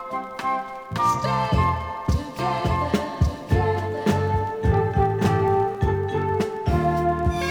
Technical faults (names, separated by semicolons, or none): doubled audio track